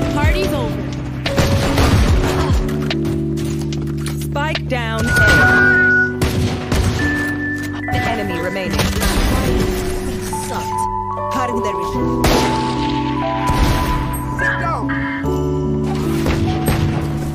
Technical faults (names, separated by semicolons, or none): loudspeaker feedback squeal